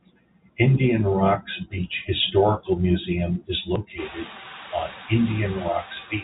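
A speech recording over a telephone-band G.711 path, with nothing audible above 4 kHz, carries noise suppressor artifacts throughout: the background is pulled down by about 18 dB between phrases and lets more through under the voice, leaving a residue that pumps with the speech and can give it a thin, processed texture. At 3.76 s there is a brief skip, roughly 20 ms of sound gone with the two sides butted together, most likely audio missing between chunks, which fits a recorder handing over 2-second blocks. From about 4 s the room noise rises by about 23 dB, to roughly 18 dB under the speech, and the suppressor then causes speech cut by the noise suppressor between 4.09 and 4.69 s. It mistakes parts of the voice for noise and drops them by up to about 14 dB, swallowing around 150 ms in total.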